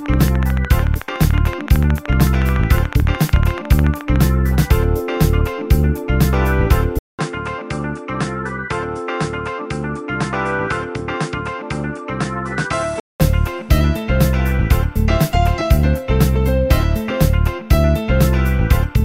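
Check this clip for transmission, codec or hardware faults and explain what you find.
Two faults are audible. From 0.06 to 4.17 s there is a train of clicks: about fifty regular, similar ticks at 13.7 per second, peaking around 5 dB above the sound, likely interference or a faulty connection.

From 6.99 to 13.20 s the input switched to a poorer device, likely. After a 200 ms gap, the sound turns duller with nothing above 10.1 kHz, drops roughly 10 dB, and gains a faint new noise floor before clearing.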